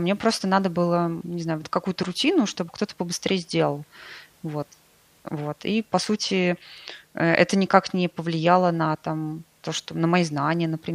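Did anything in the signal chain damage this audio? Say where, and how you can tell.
No, no signal-chain damage audible.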